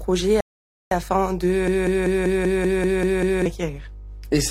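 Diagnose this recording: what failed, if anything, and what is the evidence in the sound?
Rebuffering stall at playback: silence from 0.41 to 0.91 s, then the sound resumes exactly where it stopped. About 0.51 s is added, nothing lost, unlike a dropout.

Broken-record loop from 1.68 to 3.46 s: a 0.19 s fragment repeats exactly nine times. Likely a stalled stream resending its last buffer. Unlike a stall, the underlying audio is lost.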